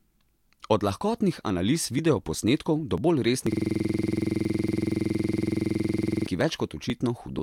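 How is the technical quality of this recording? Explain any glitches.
At 3.52 s the speech abruptly gives way to a rapid, mechanical stutter lasting until 6.27 s. A single 46 ms fragment repeats about 60 times, at 21.5 repetitions per second, producing a rough, machine-gun rattle instead of the continuing speech. This is a system hang loop: the computer or audio driver froze while the sound hardware kept replaying the same ring buffer. The 46 ms loop length fits a 2048-sample buffer.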